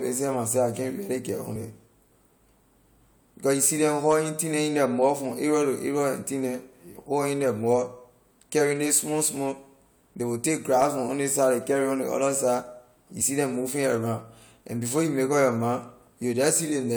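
Speech with compressed frames skipped at 1.54 s and 13.2 s, between "other side you" and "neh moving". Each time about one 23.2 ms frame drops out, so the sound jumps ahead by about 20 ms.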